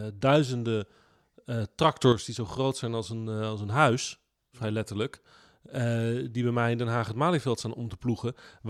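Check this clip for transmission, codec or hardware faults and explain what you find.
One fault is audible. From 2.02 to 2.13 s, between "duizenden eh" and "die zo groot zijn", there is a sudden gain jump of about 8 dB. The speech and background rise together at once. The likely cause is a gain change applied without a ramp.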